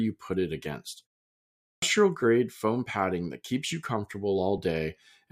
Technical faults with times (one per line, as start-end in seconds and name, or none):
1.56-1.82 clipped start after a pause